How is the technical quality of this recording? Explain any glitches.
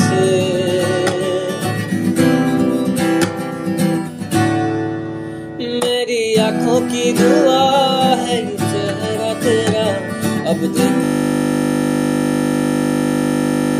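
The recording has one serious fault, a system hang loop at the end. From 11.04 s to the end, the sound abruptly gives way to a steady buzz. The computer or driver stalled, and the audio hardware kept replaying the same 20 ms stretch of its ring buffer, repeating it at 50 Hz well over a hundred times. Unlike mains hum, which sits underneath the sound, this buzz completely replaces it and never varies, because one exact fragment repeats.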